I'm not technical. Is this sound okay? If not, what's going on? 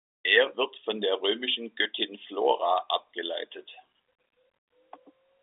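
Yes, nothing stood out as a problem when I listened to this speech recording.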